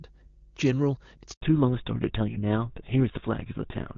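A low, steady drone sits under this speech recording from start to finish. It is a 50 Hz mains hum, roughly 30 dB below the speech, with some low harmonics above the fundamental. The hum points to a ground loop or a nearby transformer leaking the power-line frequency into the signal path. At 1.33 s the speech suddenly fades out within a few tens of milliseconds and drops to silence until 1.41 s, an 80 ms hole. This is a handover gap. While the phone switched the call from one network cell or radio technology to another, no speech frames arrived, so that stretch is simply missing rather than smeared or concealed. From 1.41 s to the end, the speech sounds duller and rougher, because the upper sibilance and air are gone and nothing remains above 4 kHz. This is a fallback to narrowband. The call left HD Voice and continued on an older narrowband codec, most likely GSM full rate, which can only carry the classic telephone band. 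Before the switch, the AMR wideband (HD Voice) codec was carrying the call cleanly, with the brighter sound of a high-rate AMR-WB link and no audible coding roughness.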